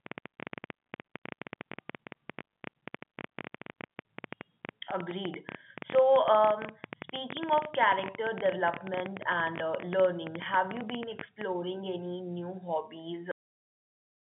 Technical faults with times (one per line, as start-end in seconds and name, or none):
13.31-14.31 cut-off end